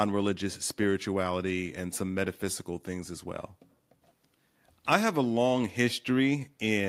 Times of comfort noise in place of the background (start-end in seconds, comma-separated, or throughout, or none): none